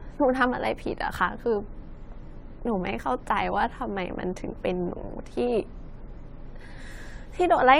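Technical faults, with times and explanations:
Throughout, generation loss: the speech sounds swirly, hollow and smeared, with blurred consonant onsets and nothing above about 16.5 kHz. This is worse than one pass at a rate that fits 96 kbit/s AAC-LC would give. The likely cause is repeated decoding and re-encoding, around seven times. Each pass quantised the signal again on a shifted frame grid, so coding noise and spectral holes accumulated and transients spread out.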